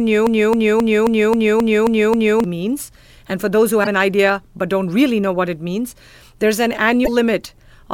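A speech clip that opens already caught in a broken-record loop: from 0.00 to 2.44 s a fragment of about 0.27 s repeats exactly, eight times back to back, before normal playback resumes with "means and for those". This is likely a stalled player or stream re-sending its last buffer. On a waveform it shows as identical repeating blocks, and on a spectrogram as a strip of copy-pasted patterns. Damaged data in the compressed stream then causes two short glitches as the decoder loses frame sync. The first runs from 3.80 to 3.87 s, between "and for those who" and "an idea but don't". The second runs from 7.02 to 7.09 s, just after "it means there's an". Each appears as a brief broadband smear or blocky vertical band on the spectrogram, with an abrupt discontinuity in the waveform.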